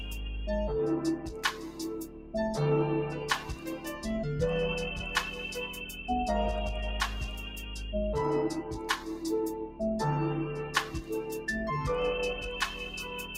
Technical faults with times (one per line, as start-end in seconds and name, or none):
0.00-13.37 noise suppressor applied to music or sounds
1.17-2.34 sound cut by the noise suppressor
3.39-4.06 sound cut by the noise suppressor
10.85-11.11 sound cut by the noise suppressor